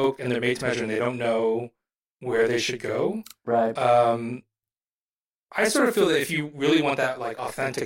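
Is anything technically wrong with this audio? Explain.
Yes, there is channel delay (doubling) throughout: one channel runs 40 ms late before the mono sum, so every onset is followed by an equal-level copy. The waveform shows each transient twice, and the spectrogram shows comb-filter notches spaced 25 Hz apart.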